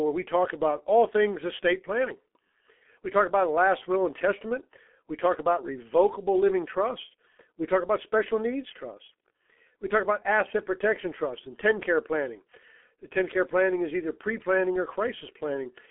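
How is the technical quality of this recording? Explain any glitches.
Poor: the whole recording passes through a low-bitrate telephony codec. G.723.1 codec, throughout: coarse 30 ms frames fitting a roughly 6.3 kbit/s rate leave the speech muffled and hoarse, with blurred consonants, a 250 Hz to 3.4 kHz band, and nothing above 3.6 kHz.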